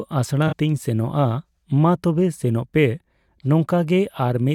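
AAC frame loss with concealment at 0.47 to 0.53 s: about 43 ms of speech, fitting two lost frames, is rebuilt from the preceding spectrum, leaving a brief smeared, phasey patch.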